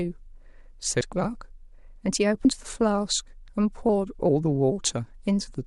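Compressed frames skipped at 1.01 s and 2.45 s: the decoder drops whole 32 ms frames, so the speech jumps ahead, by about 30 ms at the first point and about 70 ms at the second, which fits one and then two lost frames.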